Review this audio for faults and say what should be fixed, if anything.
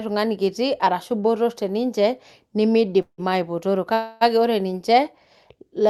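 Two call audio freezes interrupt the speech. At 3.02 to 3.30 s, the last sound stretches into a fading buzz, then about 90 ms of silence. At 3.94 to 4.23 s, a 272 ms fill precedes "ore ninche". Nothing is lost. Delayed packets likely starved the jitter buffer. A larger or adaptive jitter buffer and a steadier network route would prevent both.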